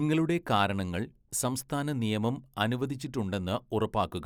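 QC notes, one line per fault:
No faults detected in this speech recording. Nothing here needs flagging.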